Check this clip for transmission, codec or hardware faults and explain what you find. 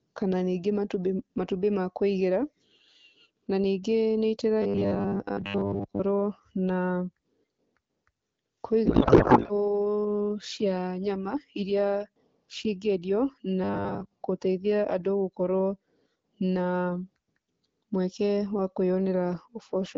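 Three faults show up in this speech clip, two of one kind and one of another.

From 4.62 to 6.00 s and again from 13.64 to 14.12 s there is robotic sound from repeated short buffers. Audio likely reached the player too seldom, so it looped recent fragments while skipping most of the real signal. The loop imposes a rigid 100 Hz buzz, which fits a 10 ms buffer, and leaves a metallic tone that only loosely tracks the speech.

From 8.86 to 9.52 s there is a codec payload misread. The AMR frames were packed octet-aligned but read as bandwidth-efficient, so the decoder took its parameters from the wrong bit positions. The speech gives way to garbled noise and warble that barely follows it. The AMR-WB link at 12.65 kbit/s keeps speech clear around these events.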